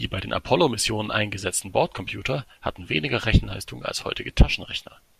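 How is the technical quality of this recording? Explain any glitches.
No glitches can be heard anywhere in the recording. There is nothing in the speech that needs a technical explanation.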